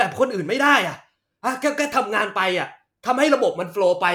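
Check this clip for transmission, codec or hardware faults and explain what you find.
Nothing to report; no faults are audible anywhere in the speech.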